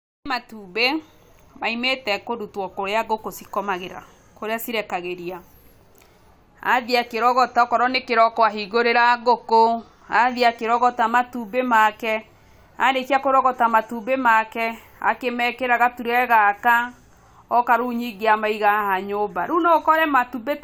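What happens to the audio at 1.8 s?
Nothing goes wrong at 1.8 s; the speech plays through that moment intact, with no dropout, click or distortion.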